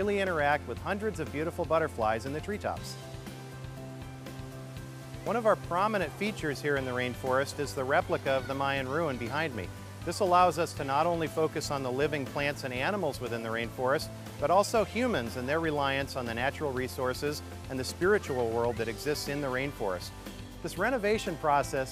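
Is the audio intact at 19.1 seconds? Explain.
Yes, the audio at 19.1 seconds is intact, with no audible fault at that point.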